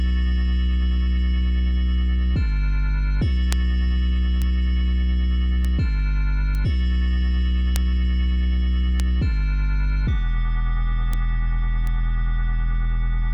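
Eight sharp ticks land in the audio at 3.53, 4.42, 5.65, 6.55, 7.76, 9.00, 11.13 and 11.87 s. Each is a bit error spike: a flipped bit knocks one sample, or a run of two or three, off by a power of two before it snaps straight back. That leaves a broadband click unrelated to the surrounding sound. The loudest, at 3.53 and 7.76 s, peak around -2 dBFS, and the quietest sit near -14 dBFS.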